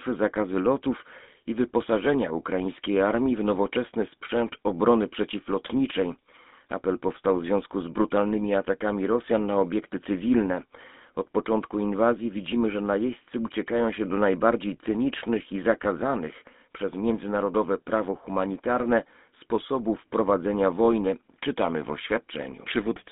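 From start to finish the speech has a buzzy, gravelly roughness, with a thin, boxed-in tone and no low bass or bright top. This is the GSM full-rate codec. It rebuilds the voice from a vocal-tract model driven by a coarse, regularly spaced pulse excitation. The band here runs only from about 200 Hz to 3.6 kHz, and the plainly audible grit fits the 13 kbps full-rate scheme.

At 9.26 s, right after "związku z brutalnymi atakami", the voice breaks into a short squawk and gargle lasting to 9.33 s, before "na obiekty cywilne" resumes. These are GSM bit errors. Flipped bits corrupted the filter, pitch or gain values handed to the decoder, so a few consecutive frames came out with a bent spectrum and an erratic level. The brief burst suggests an error rate near 0.9 percent on a weak link.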